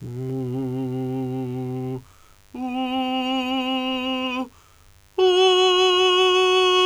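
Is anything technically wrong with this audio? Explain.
Yes. Mains buzz runs through the whole music clip: switching spikes from 50 Hz power leak in twice per cycle, leaving a steady raspy buzz about 35 dB under the signal.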